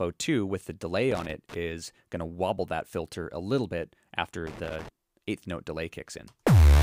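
Loose connector crackle appears at 1.11 to 1.54 s and again at 4.47 to 4.89 s: a worn contact rapidly making and breaking chops the signal into irregular scratchy bursts, unlike the single clean click of a digital dropout or evenly spread surface noise.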